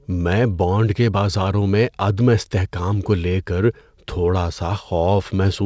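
Nothing stood out on listening; the speech sounds as expected for audio carried over a wideband call link, with no content above about 8 kHz, which fits the G.722 codec.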